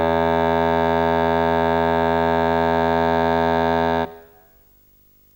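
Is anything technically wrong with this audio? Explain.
Yes. Video or display buzz runs through the whole music clip. A screen or video cable couples into the audio. This adds a 50 Hz buzz with hash, plus a thin 15.6 kHz whine, well below the music.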